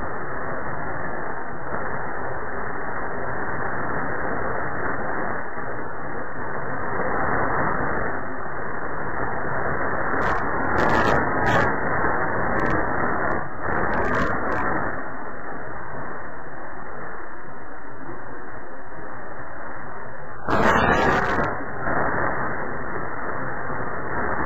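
From start to finish the clip suffers from stereo read as mono. Left and right samples were taken one after another as a single channel. Everything plays at half speed, a full octave low. A fainter mirrored copy sits in the upper spectrum.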